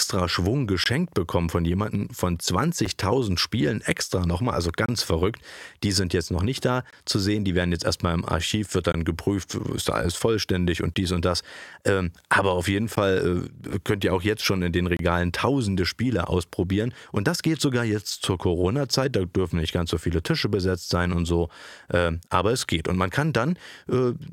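Speech clip with a gap between stream segments recurring every 2 s: hard-edged silent holes of roughly 8 to 27 ms at 0.84, 2.86, 4.86, 6.90, 8.92, 10.94, 12.96 and 14.97 s. Landmarks include just before "bekommen von jemandem von", just before "geprüft ist da alles", and right after "aber auf jeden". Consecutive 2 s segments are timestamped slightly apart, and the player pads each gap with silence. Nothing is dropped, so the timeline grows slightly at each joint.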